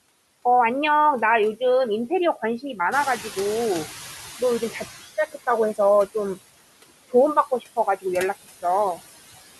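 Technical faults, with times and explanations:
Throughout, noise suppressor artifacts: the suppressor pulls down the frequency bands it judges to be steady noise, frame by frame, cutting the background by about 16 dB. Because the reduction changes from frame to frame, the leftover noise dips in the gaps and comes back up underneath the talker.
2.91 to 5.02 s, noise suppressor catching up: the room noise steps up by about 11 dB at roughly 3 s, and the suppressor's noise estimate still reflects the quieter background from before. For a short stretch the louder noise passes with less reduction than before, then it steadily sinks as the estimate adapts over about 2.1 s, settling at a cut of about 13 dB. After the rise the room noise sits about 13 dB below the speech.
7.35 to 8.05 s, speech cut by the noise suppressor: here the suppressor classifies part of the speech as noise and turns it down with the background, by as much as about 16 dB at the deepest point. 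The affected portions add up to around 150 ms spread across this window, so the affected speech comes across swallowed or faint.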